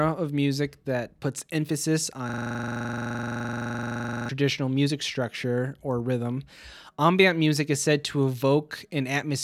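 Right after "music that puts emphasis", from 2.29 to 4.29 s, there's a system hang loop: the driver froze while the hardware kept replaying one 42.67 ms chunk, which fits a 2048-sample buffer, so you get a rattly stutter at 23.4 Hz until "music structure or rhythm".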